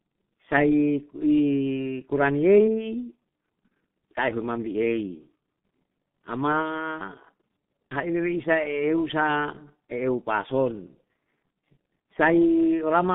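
The whole recording has passed through the G.723.1 codec, a low-rate internet-telephony coder working in 30 ms blocks. It keeps only the band from about 150 Hz to 3.6 kHz and rebuilds the voice from a coarse model that updates slowly. The damage is heavy: speech sounds muffled and hoarse, consonants smear together, and the coder runs at around 6.3 kbit/s.

At 3.68 s comes VoIP packet loss concealed by the speech codec. A gap of 30 ms, matching one lost G.723.1 frame, reaches the decoder with nothing in it. The decoder fills the gap by repeating its last pitch and spectral shape at falling gain. The result is a brief, fading patch where the voice is stretched out and weak, and it stays weak or distorted just after 3.71 s as the decoder recovers.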